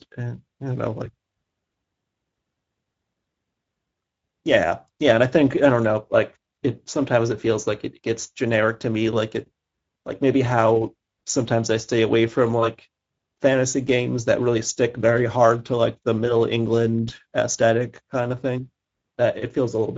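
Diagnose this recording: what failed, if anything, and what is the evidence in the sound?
Codec stage: Speex coding damage is plainly audible throughout the speech, with nothing above 7.7 kHz. The coarse excitation points to a mid-rate wideband setting near 16.8 kbps.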